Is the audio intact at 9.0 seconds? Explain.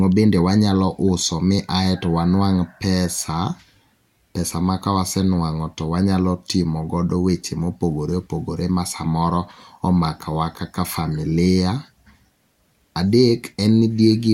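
Yes, the audio is intact at 9.0 seconds, with no dropout, click, distortion or other fault there.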